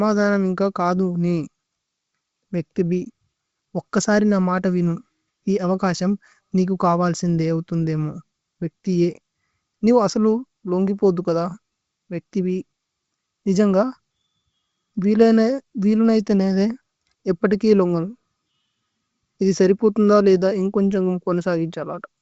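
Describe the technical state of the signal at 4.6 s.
At 4.6 s the audio is intact, with the speech carried cleanly through G.722 wideband telephone coding at 64 kbit/s and extending up to about 7 kHz.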